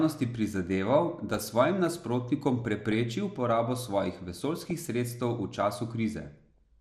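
Throughout, the speech sounds dull and gurgling, with a grainy edge and the top end thinning in and out. That is the character of MP2 compression, likely from a stream around 80 kbps. The codec is short of bits, so upper sub-bands drop out and return from moment to moment, and the bands that survive are coarsely quantised, giving the plainly audible granular texture.

From 1.14 to 1.90 s, again from 2.81 to 3.03 s, briefly from 4.60 to 4.71 s and finally from 6.28 to 6.58 s, bursts of noise blips break over the speech. This is DAB burbling. Under weak reception a small fraction of a percent of bits are still wrong after error correction. Wrong samples put short blips of noise in single sub-bands across each of these spans.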